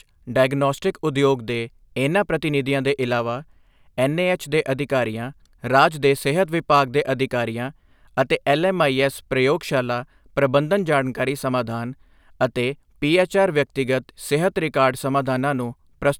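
No technical faults turn up anywhere in the recording. The speech runs without any break, glitch or other audible problem.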